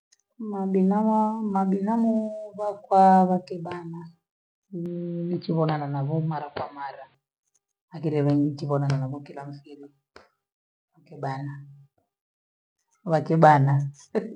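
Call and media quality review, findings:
Input likely switched to a poorer device, 4.86–7.15 s. Narrower capture path: nothing above 4.7 kHz, so speech turns dull and boxy, then full band returns at 7.15 s. Faint new background noise, well below speech. No gap at either switch, level roughly unchanged.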